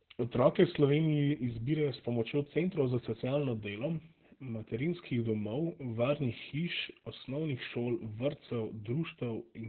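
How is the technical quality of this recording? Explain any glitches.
The recording is heavily compromised by low-rate voice compression throughout. From start to finish the speech sounds muffled, hoarse and faintly robotic, with nothing above 4.2 kHz. This is Opus voice compression: its SILK linear-prediction coder has narrowed the band to narrowband and coded the excitation coarsely, which fits a bitrate of about 8 kbps.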